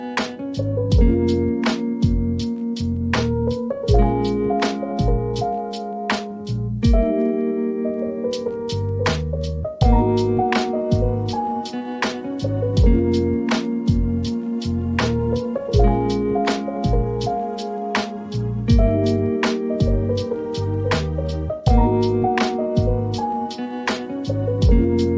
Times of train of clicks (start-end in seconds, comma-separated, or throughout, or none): none